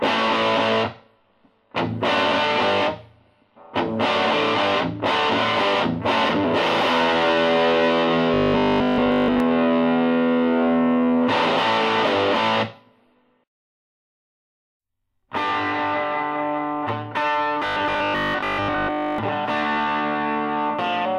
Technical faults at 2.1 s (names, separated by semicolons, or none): none